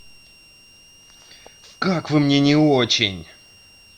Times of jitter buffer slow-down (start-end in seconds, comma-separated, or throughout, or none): none